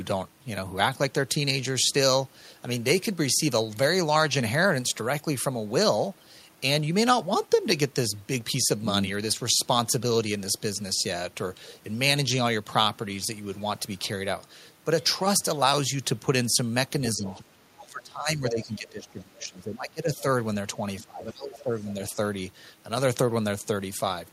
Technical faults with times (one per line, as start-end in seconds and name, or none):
17.16-17.45 speech suppressed in double talk
17.26-17.38 other side's voice leaking through
17.76-20.24 speech suppressed in double talk
21.02-22.17 speech suppressed in double talk
21.60-21.85 other side's voice leaking through